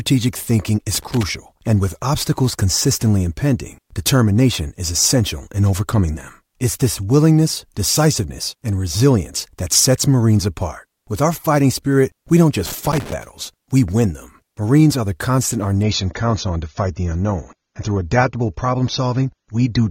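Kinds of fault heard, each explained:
Loose connector crackle: a worn or dirty contact keeps making and breaking, chopping the signal and adding pops. It appears as irregular scratchy bursts from 0.95 to 1.29 s, just before "and with obstacles consistently", and from 12.66 to 13.13 s, between "fighting spirit we don't" and "we win them".
Adaptive stream at a lower bitrate: after "constant our", at 15.8 s, the stream abruptly switches without a gap to a much leaner encoding, consistent with AAC dropping from 96 to 24 kbit/s. Treble vanishes above 7.4 kHz, and codec artefacts thicken through the end.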